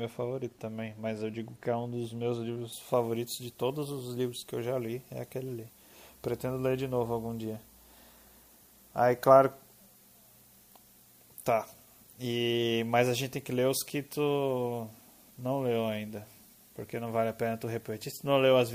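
From 2.72 s to the end, pre-emphasis is left on: an FM 50 µs treble lift went uncorrected, putting 10 kHz about 11 dB above 1 kHz. The speech sounds thin, bright and sibilant. Unlike an arbitrary treble boost, the rise climbs steadily from about 3.2 kHz.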